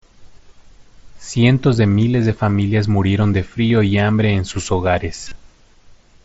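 Three brief spots of concealed Bluetooth headset packet loss, over a light mSBC wideband link. At 1.41 s, just before "de miles de familias", about 15 ms goes missing. At 3.68 to 3.70 s, between "de familias murieron de" and "y hambre en sus", about 22 ms is filled by repeating the last stretch of waveform, giving a buzzy tone. From 5.24 to 5.32 s, after "y hambre en sus", losses scatter over 75 ms with a 30 ms run, so a held tone and small warble creep in.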